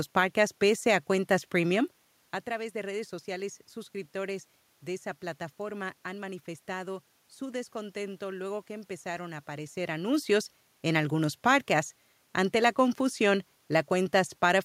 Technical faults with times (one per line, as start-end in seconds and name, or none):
none